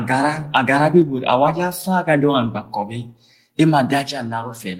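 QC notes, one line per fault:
1.02 s and 4.08 s, microphone volume stepped down: the level abruptly falls by about 4 dB each time, likely because the call software judged the input too hot and cut the device's input volume in one step, so sound and background drop together at once.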